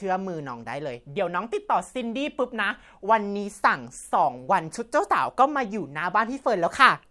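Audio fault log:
Nothing stood out on listening to this speech recording.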